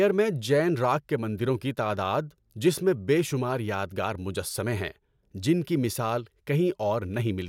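Listening to this recording of speech, nothing technically wrong stood out at any point.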